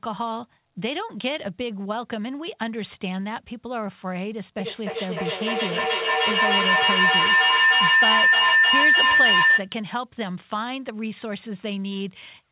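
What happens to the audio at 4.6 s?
A feedback howl starts at 4.59 s: a shrill tone near 2 kHz swells out of the speech, the loop repeating roughly every 300 ms, until it stands about 11 dB above the talker at its loudest, then stops at 9.74 s. Two devices sharing one room on the call form a loop, microphone to loudspeaker and back, that gains level on each pass, so the repeats build and narrow onto the frequency the loop favours rather than dying away.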